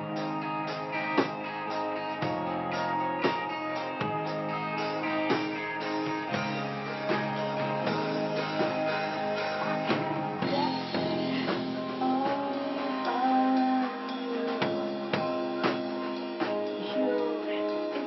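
Nothing technically wrong turns up anywhere in this audio, so there's no fault to point to and no cause to chase.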